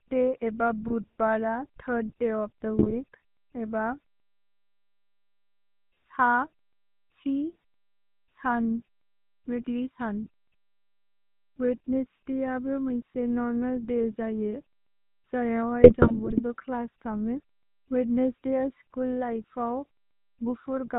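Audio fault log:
Throughout: GSM full-rate codec. The whole speech clip has the buzzy, gravelly roughness of the old GSM full-rate coder, which fits a 13 kbps stream. It rebuilds the voice from a vocal-tract filter driven by regularly spaced pulses, keeping only every third excitation sample, so the texture turns coarse and grainy. Nothing comes through above 4 kHz, so it sounds dull and band-limited as well. The damage is plainly audible.
0.88–0.93 s, 2.78–3.04 s and 15.82–16.41 s: GSM bit errors. Three bursts where the decoder was fed corrupted bits, like on a weak radio link. When the filter, pitch or gain values get scrambled, the spectrum bends or the level jumps frame after frame while the bad patch lasts, so the voice breaks into squawks, pops and gargling, with the last burst the longest, right before "क्लस् थमे वेद्नेस्स्". That last burst is long enough to suggest a run of around thirty bad frames.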